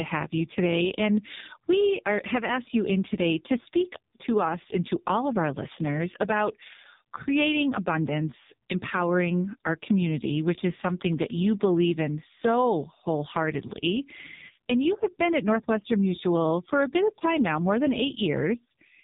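Throughout, heavy AMR narrowband mobile codec damage removes everything above 3.8 kHz and, unlike filtering, makes the voice buzzy and synthetic, fitting a roughly 5 kbps mode.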